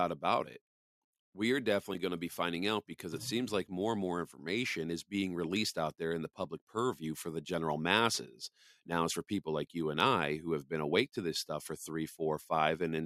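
At 1.94, 8.15 and 11.16 s the speech has a repeated buffer. Fresh audio reached the output late, so the last block played again, twice at the first two points and once at the third. Each block is about 5.3 ms, which fits a 256-sample buffer, so the repeats are heard as a brief buzzy click rather than a stutter. Unlike a dropout, the gap is filled with repeated sound instead of silence.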